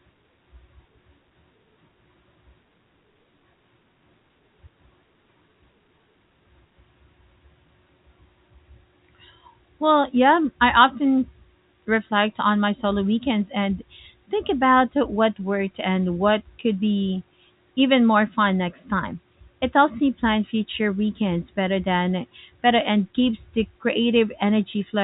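Nothing stood out on listening to the speech, which comes through the telephone-band G.711 A-law coding with its usual 4 kHz ceiling.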